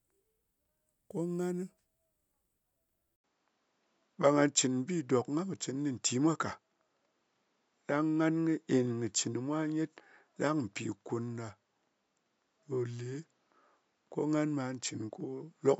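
Speech clip, and at 3.16 s there's a short gap of about 80 ms, after which the sound goes duller and stays that way to the end. Nothing gets through above about 7.6 kHz, the level shifts by a few dB, and a new, faint background noise sits roughly 50 dB under the voice. That's the signature of an input switched to a poorer device, most likely a different microphone or a headset call profile taking over mid-recording.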